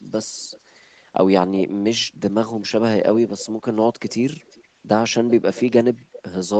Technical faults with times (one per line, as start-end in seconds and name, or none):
3.17-4.64 echo leak